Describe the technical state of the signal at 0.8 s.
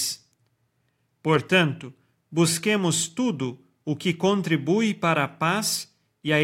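At 0.8 s the speech signal is intact, with no audible fault at that moment.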